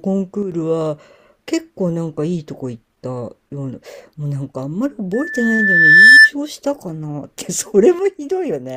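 From 0.43 to 0.52 s the speech level falls abruptly by about 6 dB and then recovers. This is most likely one channel dropping out: with one stereo side lost, the mono sum keeps only half of the shared signal. On a waveform it appears as a sudden narrowing of the envelope, with square edges rather than a fade. A spectrogram shows the whole band dimming evenly at once.

At 5.13 s a loudspeaker feedback squeal begins. A steady tone near 1.8 kHz rises over about a second until it stands roughly 15 dB above the speech, and it cuts off at 6.31 s. The microphone was picking up the loudspeaker it fed, and at that frequency the loop gain went above one, so the tone kept reinforcing itself. A spectrogram shows a single bright horizontal line that grows stronger. The waveform swells into a dense, regular oscillation.

At 7.99 s the same 6 dB drop returns and lasts to the end of the clip. The cause is again likely a lost stereo channel, and it shows as the same flat step down in both the envelope and the spectrogram.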